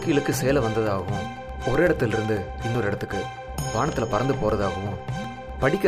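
Periodic USB or driver dropouts run from 0.12 s to 5.75 s, repeating every 0.125 s. Something stalls the USB bus or audio driver at that fixed rate, cutting out about a millisecond of sound each time and leaving silence. This produces a steady train of ticks over the signal.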